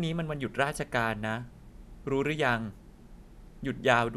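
Speech recording with no technical faults to report.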